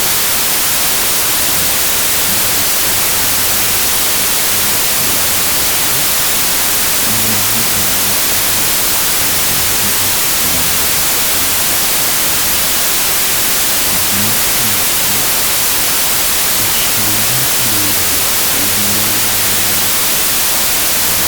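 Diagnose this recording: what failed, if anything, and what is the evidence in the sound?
The failure sits at the sample-format conversion stage and is a wrong sample width. Speech written as 32-bit integers has been read as 16-bit, so each true sample splits into two values. Only the upper half carries the real signal, while the lower half is noise-like, giving loud hiss over the whole clip and playback at half speed, an octave low. On a waveform the trace is a dense, near-full-scale block. A spectrogram shows a bright broadband floor with faint, compressed harmonics beneath it.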